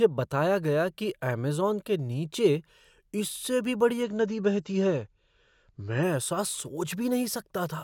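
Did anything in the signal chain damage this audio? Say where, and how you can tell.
Yes. From 4.03 to 6.03 s, just after "नीचे इससे भी बड़ी", the speech abruptly turns dull and swirly, with nothing above 7.7 kHz, then snaps back with no gap. This is an adaptive stream at a lower bitrate, a network-stage switch: a slowing connection made the player fetch a leaner AAC rendition. The sharp band limit and added artefacts fit a drop from roughly 96 to 32 kbit/s.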